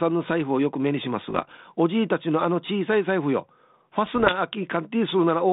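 Speech, heard through a narrow telephone band that fits 32 kbit/s G.726. Bit errors on the ADPCM link cause pops and rough bursts from 1.28 to 1.52 s and from 4.06 to 4.37 s. Each flipped bit throws off the decoder's step size, so the damage rings on briefly.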